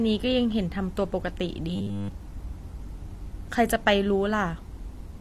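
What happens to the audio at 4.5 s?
The speech at 4.5 s, like the rest of the clip, was likely passed through two lossy codecs in a row, transcoding between lossy codecs. The sound fits an MP3 stage near 50 kbit/s followed by HE-AAC near 40 kbit/s. The second encoder spends its scarce bits re-coding the first one's smearing and adds its own band-replicated highs over the dull upper band left by the first, so the two sets of artefacts are heard together.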